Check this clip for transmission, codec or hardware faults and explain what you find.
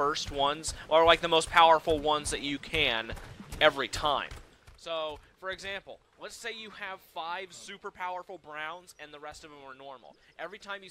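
One fault is audible: zipper noise between 4.22 and 4.84 s. A level drop of roughly 15 dB is applied in coarse steps, around fifty a second, instead of a smooth ramp. Each jump clicks, so the fade ticks audibly. The waveform's envelope shows a staircase, and the spectrogram shows faint, evenly spaced vertical lines.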